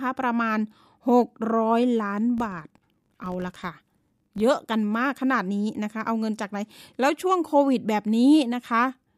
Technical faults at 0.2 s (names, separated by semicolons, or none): none